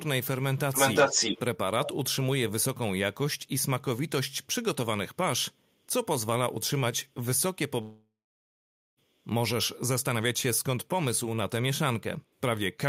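From 0.57 to 1.4 s an echo leak brings back a delayed copy of the speech about 0.36 s behind, roughly 5 dB louder than the original, likely from a loudspeaker echo canceller letting far-end sound through. A spectrogram shows the same harmonic patterns repeated, shifted right.

At 7.81 s a long network dropout begins, likely from audio packets failing to arrive. About 1.16 s of speech is lost. The last sound is stretched into a fading buzz or hiss, then about 0.83 s of near-silence appears as a flat, empty waveform band before speech resumes at 8.99 s.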